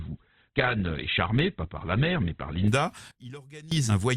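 From the start until about 2.68 s the speech sounds dull and smeared, its treble thin or replaced by a hissy, synthetic sheen, with codec artefacts clearly stronger than later. The quality then improves abruptly with no break in the audio. This is an adaptive stream starting at a low bitrate: the player opened on a cheap version, which fits a very low Opus rate of around 12 kbit/s, then switched to a richer one, consistent with about 64 kbit/s, once it had gauged the connection.

At 3.11 s the speech and the background noise drop together, instantly, by about 19 dB, and stay there until 3.72 s, when the level jumps back just as abruptly. There is no fade at either edge. This is a sudden gain jump, likely a digital gain setting or bit shift applied between one sample and the next without a ramp, then reversed the same way.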